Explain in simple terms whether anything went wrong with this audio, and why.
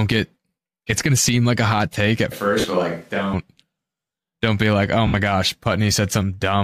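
Right after "a hot take at", around 2.32 s, the sound suddenly goes roomy and hollow and loses some of its low end, as if the talker stepped away. That's a switch to a distant microphone, most likely the close mic dropping out and a farther one taking over. Loudness stays about the same, but a faint room hiss creeps in. It snaps back to the close sound at about 3.33 s.

There are also two short glitches called lost LE Audio frames. When chunks of the Bluetooth audio stream never arrive, the decoder fills the gap by replaying the last bit of sound with its detail scrambled, so you hear a brief noisy smear instead of clean audio. The first one lands inside the distant-mic stretch, about 40 ms at 2.60 s. The second, about 70 ms, comes at 5.07 s, just after "don't be like oh".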